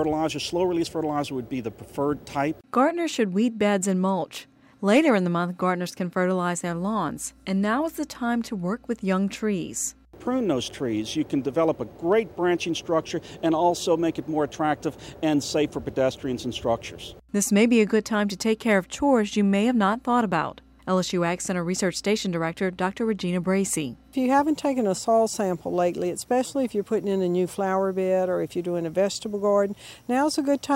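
From 6.67 s to the end, mains hum appears: a ground loop or a nearby transformer leaks the 60 Hz power line into the signal, producing a steady low drone roughly 35 dB below the sound. On a spectrogram it is a constant horizontal line at 60 Hz.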